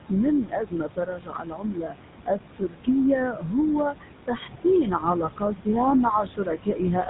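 Throughout the speech, a GSM full-rate codec, with a grainy quality that fits its 13 kbps rate, has removed everything above 3.9 kHz and left a buzzy, gravelly roughness on the voice. A noise suppressor is also cutting the room noise, which sits about 9 dB below the speech, by about 18 dB. As a result the background sinks between phrases and swells under them. From 0.09 to 2.89 s the suppressor mistakes speech for noise and pulls it down by up to about 19 dB over roughly two seconds in total, so endings and soft consonants sound swallowed. It does this again from 3.3 to 3.55 s, by up to about 13 dB, and from 3.9 to 5.68 s, by up to about 18 dB for roughly half a second, leaving faint, clipped-away syllables.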